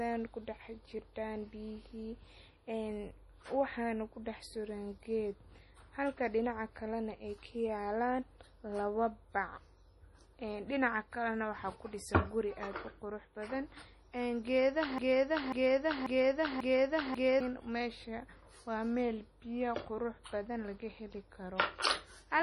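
Speech with heavy MP3 compression damage throughout: nothing is present above about 11.5 kHz, and the remaining band sounds watery and swirly as weak frequency components drop in and out between frames, which fits a very low bitrate around 32 kbps. From 14.98 s to 17.40 s there is a broken-record loop, where a 0.54 s fragment plays four times back to back and the audio that belonged to that span is missing. The likely cause is a stalled player or stream resending its last buffered fragment.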